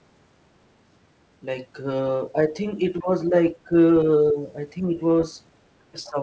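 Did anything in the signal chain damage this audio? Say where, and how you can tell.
Yes, in the call's echo canceller. Speech suppressed in double talk shows as brief dips of about 5 to 15 dB at 2.33–2.5, 3.0–3.09, 3.54–3.72, 4.31–4.51, 4.83–5.0 and 5.92–6.18 s, likely where the far end spoke at once. Unlike network dropouts, the sound ducks rather than going silent.

The other side's voice leaking through appears at 6.04–6.09 s, during the last dip, as a faint second voice about 25 dB under the speech. The same canceller likely failed to subtract all of the loudspeaker signal. A room reflection would copy the talker, not add a different voice.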